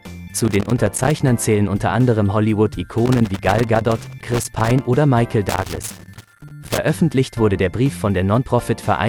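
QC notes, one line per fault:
0.34–1.20 s, 3.06–4.85 s, 5.49–6.79 s: loose connector crackle. A worn or dirty contact is making and breaking in quick, uneven succession, chopping the signal and firing pops wherever DC sits on the line. The result is ragged bursts of scratchy crackle lasting roughly a second or two each. Unlike regular digital clicks or steady surface noise, the bursts are irregular and their density varies, as though a cable were being jostled.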